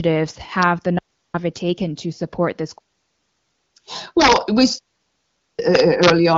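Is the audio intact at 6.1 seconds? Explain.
No. At 6.1 seconds the sound is at the very end of an integer overflow that runs from about 5.75 to 6.10 s. During this span the loudest peaks are pushed about 3 dB past the largest value the integer format can hold. They are not limited but wrap around to the opposite sign, so each peak jumps across the full range. The result is harsh, violent cracks on the loud parts of the speech, much sharper than ordinary clipping.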